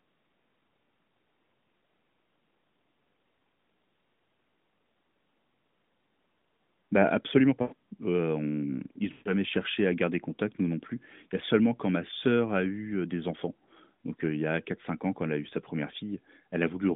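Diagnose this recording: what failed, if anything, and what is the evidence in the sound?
Lost AMR speech frames on the radio link. At 7.62 to 7.74 s, just before "heu on", and at 9.12 to 9.32 s, before "cherché à garder contact", the sound stretches and fades, which fits five and seven concealed 20 ms frames. A hard dropout would cut abruptly to silence. Here the AMR-NB decoder repeats its last parameters with falling gain, and the sound resumes weakly.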